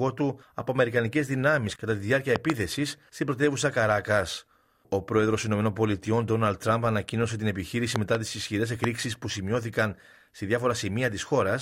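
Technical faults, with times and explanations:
2.36–2.52 s, 7.96–8.17 s and 8.84–8.86 s, loud pop: a double pop, another double pop, then a single one, each jumping to roughly 15 dB above the surrounding sound. The likely cause is a sudden voltage pulse from a plug, switch, static or driver glitch, briefly shaped by the downstream circuitry. Unlike a dropout, the sound continues unbroken underneath, and each lands as a sharp pop or thump.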